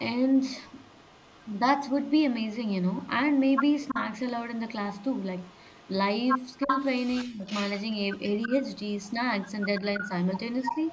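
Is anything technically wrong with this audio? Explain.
Yes. Echo leak runs from 0.29 to 2.12 s, 2.67 to 4.01 s and 4.55 s to the end: a delayed copy of the speech trails it by 333 ms. It is faint at first, about 30 dB down, then rises to about 10 dB below the speech. The likely cause is a far-end loudspeaker whose echo canceller let part of the microphone pickup through and sent it back.

Speech suppressed in double talk appears at 3.91 to 3.97 s, 6.65 to 6.70 s, 7.25 to 7.46 s and 8.47 to 8.51 s. These are brief dips of about 5 to 10 dB, with the 200 ms one at 7.25 s reaching about 25 dB. The echo canceller likely could not separate the talker from the returning echo and turned both down.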